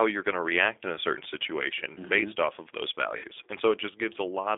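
Throughout, the speech passes through the G.729 codec at 8 kbit/s, rebuilt from a vocal tract filter, pitch predictor and sparse pulses, with the line band held to roughly 300 Hz to 3.6 kHz. The damage is plainly audible: thin, slightly rough, synthetic-sounding speech.

From 3.17 to 3.27 s, just after "based off of those", VoIP packet loss concealed by the speech codec takes over. About 60 ms of audio went missing, which fits six 10 ms frames, and the decoder extended its last pitch and filter while turning the gain down, producing a fading, stretched smear.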